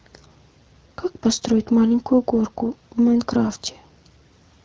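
No technical faults can be heard in the speech, which comes through the AMR wideband (HD Voice) codec at 12.65 kbit/s with nothing above about 6.9 kHz.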